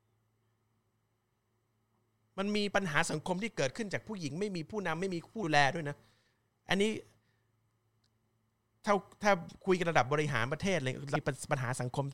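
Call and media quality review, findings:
Compressed frames skipped at 5.42 s and 11.14 s: decoder drops whole 26.1 ms frames, roughly 70 ms then about 400 ms lost, heard as smeared blips, not clicks.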